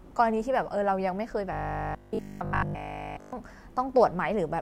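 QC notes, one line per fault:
1.53–3.33 s, robotic sound from repeated short buffers: input likely arrived too seldom, so short segments looped almost continuously, imposing a rigid metallic 50 Hz buzz, which fits 20 ms buffers.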